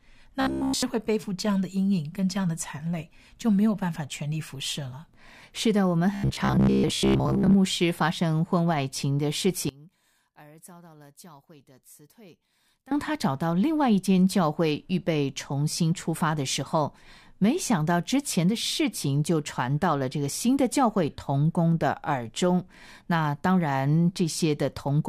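From 0.41 to 0.83 s, and again from 6.15 to 7.55 s, the speech turns into a robotic sound from repeated short buffers. A rigid buzz at 66.8 Hz runs through it. The likely cause is a stalled stream repeating its last 15 ms. The first stretch is wholly repeated. The second is mostly so.

From 9.69 to 12.92 s, the level drops by about 25 dB. Only a faint residue remains. This points to one channel inverted. The likely cause is a reversed-polarity channel cancelling the shared sound on the mono sum.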